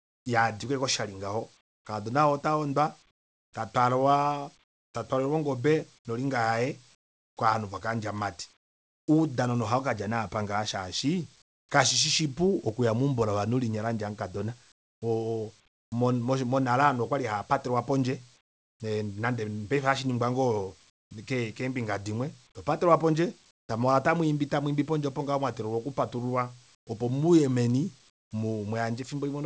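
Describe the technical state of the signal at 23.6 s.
At 23.6 s, from 23.51 to 23.69 s, a span of 180 ms, the background drops by about 16 dB into a flat, featureless hiss with none of the detail of the room tone around it, which sits about 42 dB below the loudest speech. This is likely comfort noise in place of the background: the sender stops transmitting during the pause and the receiver fills the gap with synthetic noise roughly matched to the background's level and spectrum. The band still ends at 8 kHz here, as expected from the G.722 call path.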